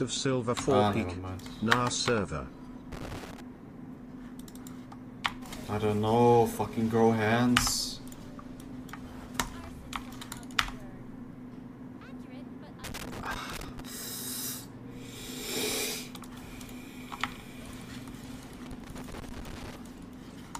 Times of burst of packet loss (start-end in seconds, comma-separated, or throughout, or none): none